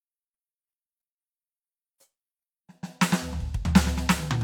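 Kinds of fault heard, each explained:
Listening to this music, nothing stood out as a technical problem.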